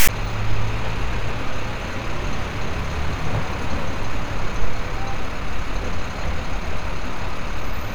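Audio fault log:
0.00–0.09 s, file tags played as audio: text tag bytes decoded as samples give a harsh, lopsided rasp pushed off-centre, then zero padding drops to dead silence before the sound proper. Unlike a click or dropout, it sits hard against the very start.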